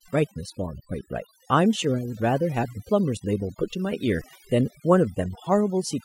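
A speech recording with overdone noise removal running from start to finish. The noise reduction was set too hard. It mutes individual frequency bands near the noise floor. The background drops and breaks up into twinkling specks.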